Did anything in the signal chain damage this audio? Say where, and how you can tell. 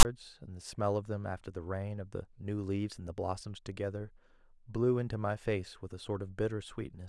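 Yes, at the storage stage. File tags played as audio: a hard-edged rasp and then silence from 0 to 0.05 s, as text tags and zero padding were read as samples.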